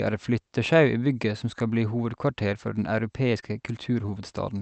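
At 2.77 to 2.79 s a lost packet was rebuilt from error correction. The packet that followed carried a low-bitrate copy of those 20 ms, and the Opus decoder played that copy, so nothing drops out. The frame comes through briefly rougher and grainier. On a spectrogram it shows as a thin vertical strip where the harmonics look smeared and a faint noise floor fills in between them. The waveform stays continuous. The same 20 ms repair recurs at 3.58 to 3.60 s and again at 4.00 to 4.02 s.

Between those, at 3.40 to 3.44 s, there is a short concealed packet loss. A 20 ms packet never arrived in time, and the receiver bridged the hole for about 17 ms by extending the preceding sound before crossfading back into the real signal. It is heard as a quick smear or wobble.

At 4.06 to 4.10 s a second concealment covers another 20 ms. It overlaps a repair from error correction at 4.08 to 4.10 s, so the stretch has both a concealed, extended texture and rebuilt grain. 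A final 20 ms rebuilt frame follows at 4.18 to 4.20 s, rough and noisy like the earlier ones.

Throughout, the call path band-limits the audio at 8 kHz, which fits a wideband Opus setting at around 48 kbps. That shows as an empty spectrogram above the cutoff.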